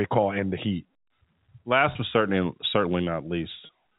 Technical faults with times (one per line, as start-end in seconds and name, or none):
1.92-1.95 packet loss with pitch repetition
3.66-3.69 packet loss with pitch repetition